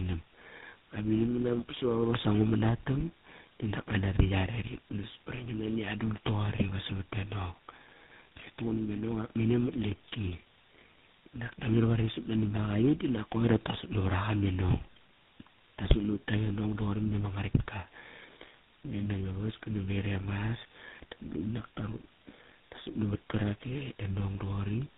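From start to finish, the speech shows tandem speech coding. It passed through several speech codecs in a row, decoded and re-encoded at each border, so every coder worked on the previous one's damage. The sound points to three speech coding stages, GSM full rate at each end with a 24 kbit/s ADPCM stage between. Nothing remains above 3.8 kHz, and the voice is muffled and rough with a warbly, watery edge.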